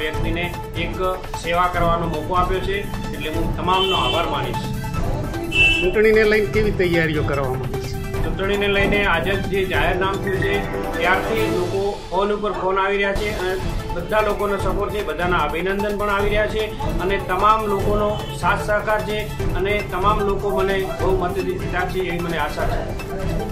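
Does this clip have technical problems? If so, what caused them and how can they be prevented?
No, no technical faults heard.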